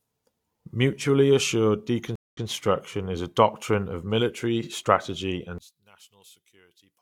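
A speech clip with two faults. At 2.16 s there is a stream reconnect. The sound drops out for 178 ms, then resumes 128 ms earlier than where it stopped, so a short stretch repeats. A fresh decoder restarts mid-stream and recovers by 2.46 s. From 5.58 s to the end, the level falls by about 27 dB and the speech turns faint. The likely cause is one channel inverted in polarity. Summed to mono, the shared centre content cancels, leaving only the small difference between channels.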